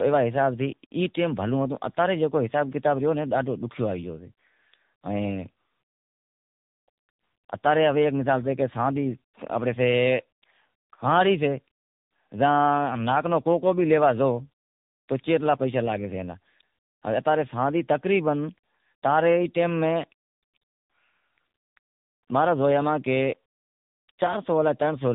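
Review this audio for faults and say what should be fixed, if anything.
The speech has tandem speech coding running the whole way through. It sounds like two speech codecs in a row, ending in something AMR-NB-like at a low rate, around 7.95 kbit/s. Each coder is handed audio the previous one already mangled, so the errors stack: the voice comes out rough, muffled and warbly, with nothing above 3.7 kHz. To prevent it, keep the call in one codec end to end, or pass the coded frames through untouched instead of decoding and recoding at each link.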